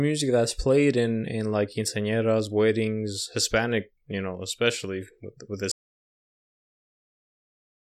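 At 5.72 s, right after "know especially with with", the speech suffers an audio dropout to silence that lasts to the end, about 2.2 s. The input was likely lost while silence kept being written. The waveform flattens to a straight line and the spectrogram goes blank, with no room tone.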